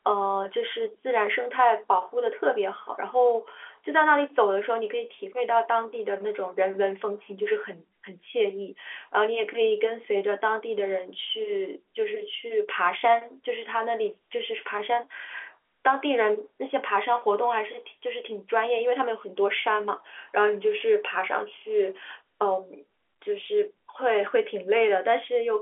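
No faults are audible: the speech sits in ordinary G.711 telephone coding, with the band running from about 250 Hz to 3.4 kHz and nothing above 3.7 kHz, as expected for that path.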